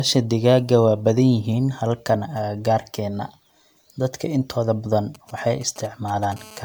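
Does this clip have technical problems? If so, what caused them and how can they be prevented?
Yes. Throughout the speech, the sound is swirly, smeared and hollow, with softened consonant attacks. The content still reaches 20.1 kHz, so a single low bitrate doesn't explain it. This is generation loss, likely from around ten successive MP3 decode-and-re-encode passes at roughly 134 kbit/s. Each pass requantises on a shifted frame grid, so the noise and spectral holes pile up. To prevent it, keep the master in a lossless format and encode to MP3 only once, at the final step.

From 5.15 to 6.34 s, just after "intooda badan", a galloping dit-dit-dit pattern of short buzzes sits about 20 dB below the speech. These are GSM signalling bursts. A nearby 2G phone exchanging control traffic sends brief groups of radio pulses at a 217 Hz rate, and the audio circuitry rectifies them into sound. Keeping phones switched off or in flight mode and well away from microphones, cables and preamps prevents this.

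From 6.36 to 6.60 s, a steady, raspy 217 Hz buzz rich in harmonics appears about 22 dB below the speech. This is GSM phone buzz, heard once a phone goes into a call and transmits continuously at 217 bursts per second, which the audio circuit demodulates. Shielded, balanced cabling and RF-filtered inputs help prevent it, along with keeping phones away from the recording chain.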